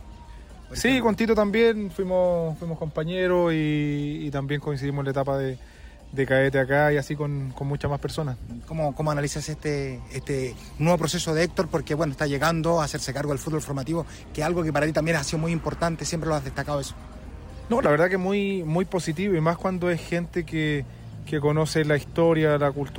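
Nothing technically wrong can be heard anywhere in the audio. There is no point at which a problem shows up, so there is no time or cause to report.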